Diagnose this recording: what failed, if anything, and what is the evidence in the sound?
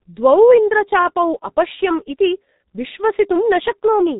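The codec stage failed: a G.723.1 codec runs throughout the speech, heavily damaging it. Nothing passes above 3.8 kHz, so the sound is muffled, and the coarse frames with a slowly updated voice model leave it hoarse with smeared consonants, consistent with roughly 6 kbit/s.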